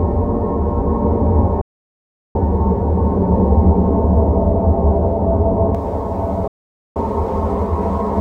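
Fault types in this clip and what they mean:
De-emphasis applied wrongly: a treble cut meant to undo pre-emphasis was applied where there was none, or applied twice. It tilts the response smoothly down to about 11 dB below 1 kHz at 10 kHz, dulling the sound until 5.75 s. Unlike a low-pass filter, it has no sharp cut-off.
Digital broadcast dropout: the receiver lost valid data and muted, fading out within about 3 ms. The sound vanishes from 1.61 to 2.36 s and from 6.48 to 6.96 s. Unlike concealed packet loss, nothing fills these gaps, and the missing material never returns.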